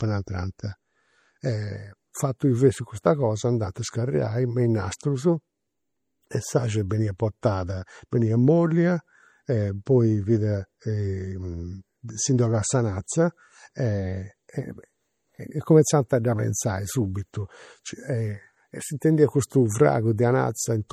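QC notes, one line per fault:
Throughout: MP3 compression. Weak detail swirls and chirps on s sounds, plainly audible, likely from low-bitrate MP3 encoding around 48 kbps.
4.99, 6.89, 9.86, 16.09, 19.00 and 19.50 s: pre-echo. Short hiss smears just ahead of sharp attacks, after "a scarigai me in" and before "a dda prenzai subitu", as block-spread quantisation noise leaks backwards.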